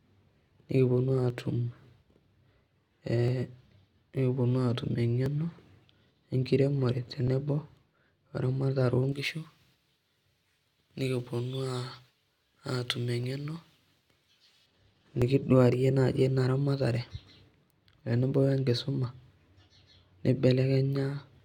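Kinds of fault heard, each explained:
Overlap between stream segments: Seven small clicks or skips fall about every 2 s, from 1.30 s to 15.22 s. The time stamps of adjacent segments overlap, so the player trims about 6 to 18 milliseconds of real sound at each join and the waveform jumps.
Pre-emphasis left on: From 9.1 s to 14.7 s the speech turns thin, bright and harsh on sibilants, with 10 kHz about 11 dB above 1 kHz. A treble boost applied for transmission was never reversed by the matching de-emphasis cut.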